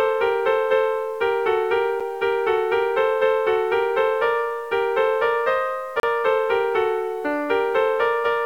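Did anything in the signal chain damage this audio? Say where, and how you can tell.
Yes. At the sample-format conversion stage, the audio was likely truncated to 8 bits without dither. Throughout the clip this low bit depth leaves grainy distortion that follows the sound, sitting only around 35 dB below it, so quieter passages turn gritty.

At the streaming or playback stage, a gap between stream segments shows where time stamps on the 1-second segments don't line up. Hard-edged silences appear at 2.00 s, lasting about 8 ms, and from 6.00 to 6.03 s. The player fills each hole with silence, and no audio is lost.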